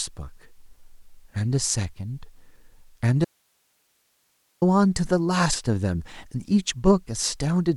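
At 3.25 s the speech cuts out abruptly and returns at 4.62 s, an audio dropout to a faint residue lasting 1.37 s. Only hiss remains, roughly 45 dB below the speech, most likely because the source feed broke while the downstream path stayed live.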